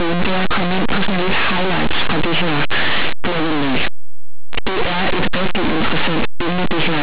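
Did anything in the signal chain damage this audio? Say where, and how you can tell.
Yes. Linear audio read as companded, in sample-format conversion. The speech is very loud, harsh distortion throughout. Linear 8-bit samples were decoded as mu-law.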